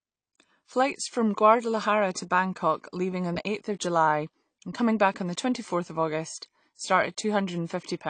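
Low-bitrate AAC compression is the likely culprit, running from start to finish of the speech. The encoder has thrown away detail to save space: nothing remains above 9 kHz, so the sound is dull and lacks air, and the damage is plainly audible, with a smeared, warbling texture on held sounds and a fizzy edge on sibilants. The degree of loss points to AAC-LC at a bitrate around 32 kbps.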